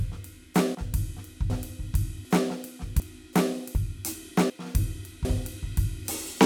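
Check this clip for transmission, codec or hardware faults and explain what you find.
The music has audio missing between chunks, recurring at 1.5, 2.25, 3.0, 3.75, 4.5 and 5.25 s. The likely cause is a recorder or processor handling the signal in 1-second chunks and dropping roughly 300 ms each time it closes one chunk and opens the next. The remaining pieces are butted together with no gap, so the music jumps forward abruptly every 0.75 s, with phrases truncated at each splice.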